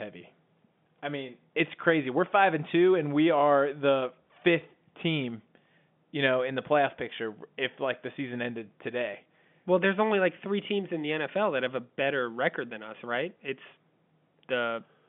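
Listening to this speech recording, nothing stood out as a technical problem, and the narrow telephone-line bandwidth of its ordinary G.711 coding is all that can be heard of the transmission path.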